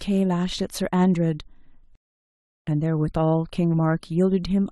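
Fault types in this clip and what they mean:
Rebuffering stall: playback starved of data, so the speech drops to silence from 1.95 to 2.67 s, then resumes exactly where it stopped, adding about 0.72 s.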